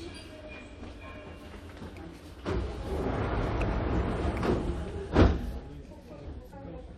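At 4.89 s and 6.51 s, compressed frames skipped: about four, then two, 23.2 ms frames never decode, so the sound jumps ahead with a smeared blip, a visible waveform discontinuity.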